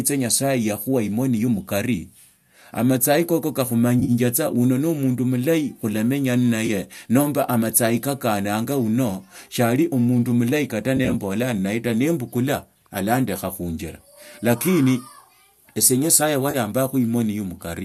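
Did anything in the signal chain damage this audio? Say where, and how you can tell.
Yes, it's the network: AAC frame loss with concealment. Brief smeared, phasey patches at 4.0–4.11, 6.67–6.70, 10.97–11.15 and 16.51–16.56 s are where the decoder guessed across missing frames.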